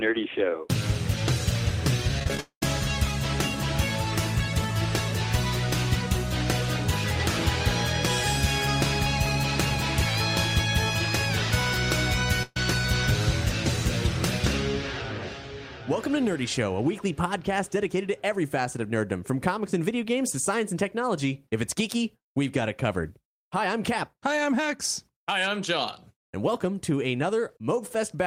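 From 2.19 to 2.39 s there is repeated packet loss, the robotic-sounding kind. Five short holes fall in quick succession, the longest 23 ms. Each is patched by stretching the previous sound, about 58 ms in all. The result is choppy, with pieces missing.

Straight after, from 2.40 to 2.63 s, the audio stops arriving. The last sound is carried on as a fading buzz or hiss, then 90 ms of silence. About 220 ms of audio is lost. A long network dropout is the likely cause.

At 12.43 to 12.57 s comes a burst of packet loss. The receiver fills a 130 ms gap by continuing the last sound and turning it down. It gives a held buzz or fading hiss. The audio resumes with 130 ms missing.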